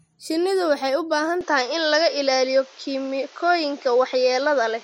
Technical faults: input switched to a poorer device

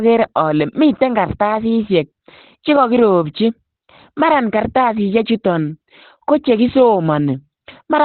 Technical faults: Opus compression

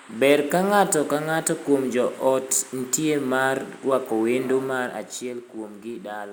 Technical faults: none

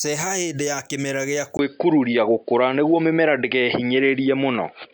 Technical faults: input switched to a poorer device

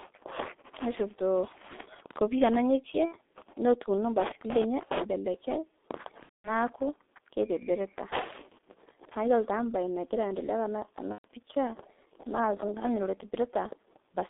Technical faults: G.723.1 codec; VoIP packet loss concealed by the speech codec

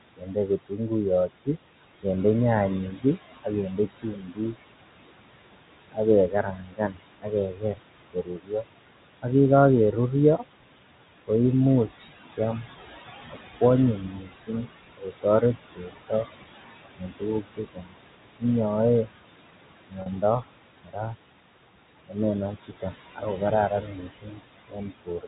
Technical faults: noise suppressor artifacts; speech cut by the noise suppressor; packet loss with pitch repetition

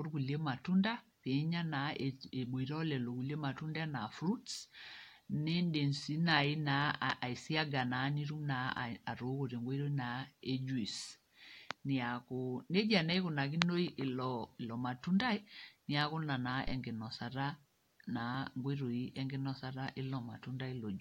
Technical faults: phantom power thump

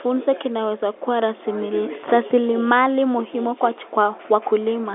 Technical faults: none

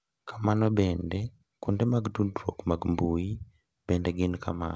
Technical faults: scattered short gaps

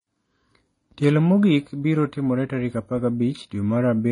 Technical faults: transcoding between lossy codecs

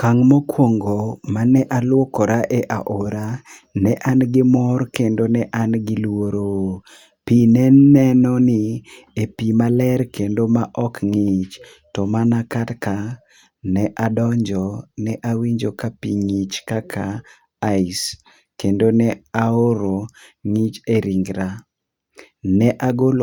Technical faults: none

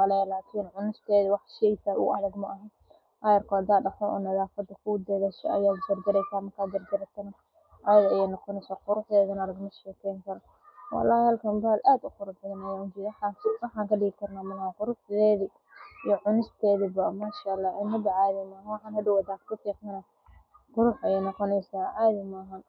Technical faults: none

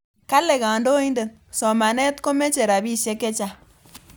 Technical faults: none

